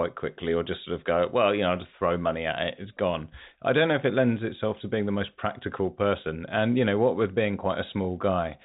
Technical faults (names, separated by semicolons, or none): none